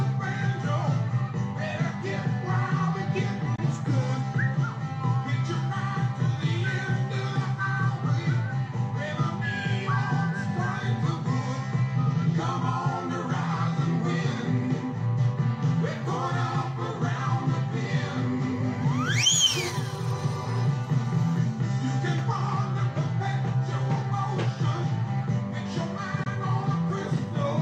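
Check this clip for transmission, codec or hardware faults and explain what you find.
Two brief gaps break the audio, one from 3.56 to 3.59 s and another from 26.23 to 26.27 s. Each is a Bluetooth dropout of about 35 ms. The sound cuts out and picks up again further along, with that short stretch missing rather than paused. The likely cause is wireless packets reaching the headphones too late and being discarded, which fits one lost frame of roughly 21 ms each time. On a waveform, each shows as a flat gap. A spectrogram shows a thin vertical blank stripe across all frequencies.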